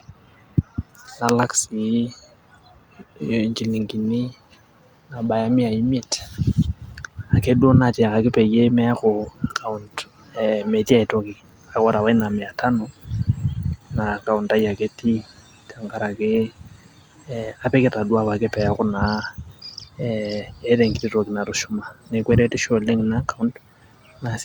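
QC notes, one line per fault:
Nothing to flag on this speech recording; no problems turned up anywhere along it.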